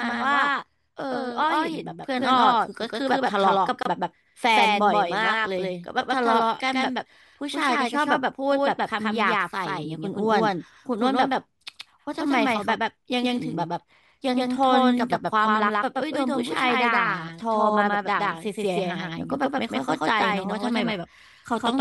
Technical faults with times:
0.00-21.81 doubled audio track
3.83-3.85 gap at a join of encoded pieces

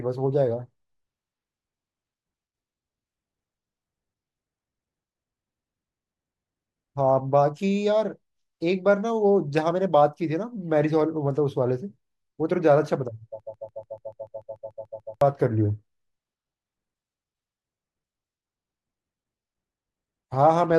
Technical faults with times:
13.40-15.21 broken-record loop

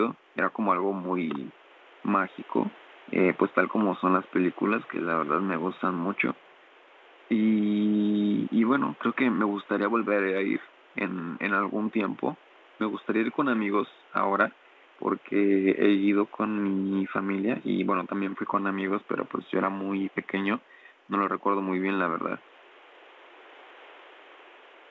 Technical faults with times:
none

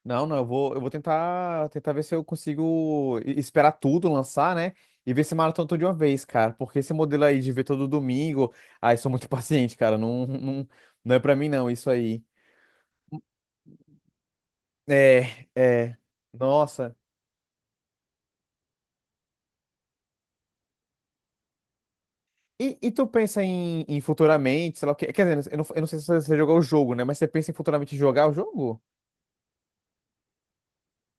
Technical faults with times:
none

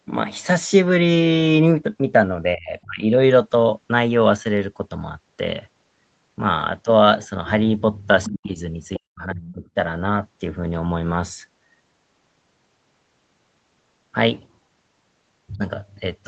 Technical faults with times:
2.55-3.01 speech suppressed in double talk
8.24-8.32 other side's voice leaking through
8.27-8.58 speech suppressed in double talk
8.94-9.00 other side's voice leaking through
8.98-9.76 speech suppressed in double talk
9.43-9.54 other side's voice leaking through

